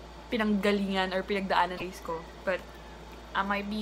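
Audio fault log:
1.77–1.82 s, broken MP3 bit reservoir: a short corrupted stretch of about 54 ms where the sound breaks continuity. The likely cause is frames lost before this point, so the following frames, which fit 26.1 ms MP3 frames, decode with borrowed data from the wrong frame.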